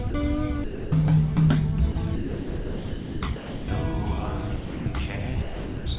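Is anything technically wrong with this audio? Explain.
Yes. The sound drops out seven times, at 0.10 to 0.14 s, 0.64 to 0.92 s, 1.92 to 1.96 s, 2.16 to 3.22 s, 3.36 to 3.68 s, 4.56 to 4.86 s and 5.42 to 5.86 s. Each time it gives way to steady noise or near silence lasting from 40 ms to just over a second. This is likely sound dropped by the voice detector: the sender judged these moments to be background and stopped transmitting, so the receiver filled the gaps with comfort noise. Unlike packet-loss concealment, there is no stuttering, repeated or smeared fragment, only a smooth noise floor until transmission resumes. Throughout the clip, the call codec's narrowband coding leaves nothing above 4 kHz.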